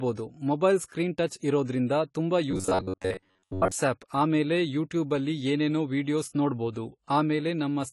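A speech recording with plainly audible AAC compression damage throughout: the sound is dull and smeared, with fizzy sibilants. On a spectrogram everything stops at a lowered cut-off, with patchy holes below it. This most likely comes from AAC-LC at a low rate, around 32 kbps. From 2.51 to 3.72 s, just before "ಆಮೇಲೆ ಯೂಟ್ಯೂಬಲ್ಲಿ ಏನೇನೋ", there is robotic sound from repeated short buffers, a rigid metallic buzz at 93.8 Hz. It is likely caused by a roughly 10.7 ms buffer being replayed in place of most of the real audio. The waveform shows near-identical cycles repeating, and the spectrogram shows evenly spaced horizontal harmonic lines.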